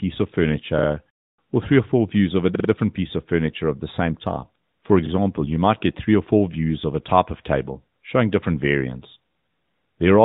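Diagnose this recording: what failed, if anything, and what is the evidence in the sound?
Repeated buffer at the driver/buffer stage, 2.55 to 2.69 s: one 46 ms slice, fitting a 2048-sample buffer, stutters four times. The waveform shows identical blocks, and the spectrogram shows vertical lines at each hard join.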